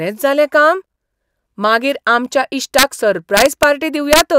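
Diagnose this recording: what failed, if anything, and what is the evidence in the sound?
Integer overflow in a fixed-point gain or sample-format conversion stage. Harsh cracks, far sharper than clipping, hit loud speech peaks at 2.79–2.83 s, 3.37–3.63 s and 4.13–4.21 s. Peaks driven about 2 to 3 dB past full scale wrapped to the opposite sign instead of being limited.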